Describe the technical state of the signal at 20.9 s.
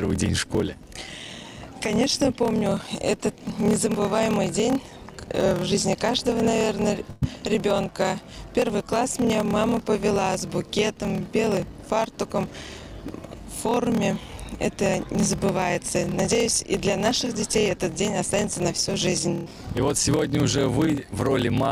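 At 20.85 to 20.89 s there is a short concealed packet loss. About 20 ms of audio failed to reach the decoder in time, and the receiver bridged the hole by extending the preceding sound for roughly 13 ms before blending back into the real signal. The result is a brief smear or wobble.

Underneath, a block size mismatch (padded) runs through this moment as it does the whole clip. Each block carries fewer samples than the next stage reads, which fits 1024 samples written into larger reads, and the remainder is zero-filled. This produces a steady buzz at 38.3 Hz and slows playback to 0.889 times normal speed with the timbre kept.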